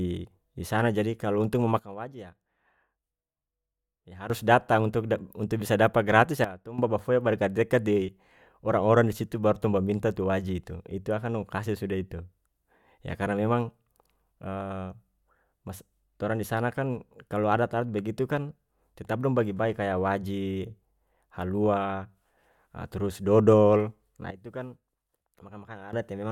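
At 1.79 s the speech and its background noise drop together by about 13 dB in a single step, then snap back up at 4.30 s, just before "datang untuk". The same abrupt dip recurs, about 12 dB, from 6.44 to 6.78 s between "dapa gratis" and "babafoya ba", and again from 24.31 to 25.93 s. These are sudden gain jumps, likely from a digital gain setting applied instantly rather than ramped, so the level changes from one sample to the next.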